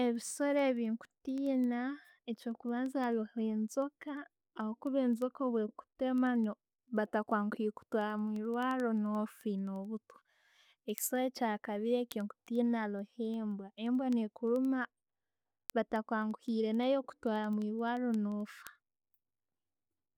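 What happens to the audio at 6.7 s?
Word clock ticks, 0.16 to 20.15 s: an unlocked digital link slips a sample about every tenth of a second, giving sharp ticks at a steady rhythm, unlike random clicks.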